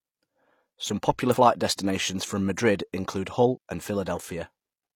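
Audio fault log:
1.30–1.35 s and 3.52–3.58 s, damaged data in a compressed stream: short glitches, the first just before "destinations from", as the decoder misreads corrupt frames and resyncs.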